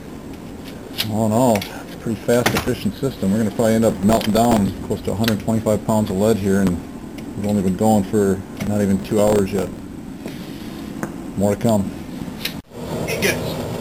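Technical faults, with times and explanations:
3.90–4.58 s and 9.00–9.79 s, processor overload crackle: the processor repeatedly missed its deadlines for very short audio buffers, a few milliseconds each. Every miss replayed a scrap of old audio with hard edges, and some twenty to thirty in a row became a gritty crackling tear over the sound.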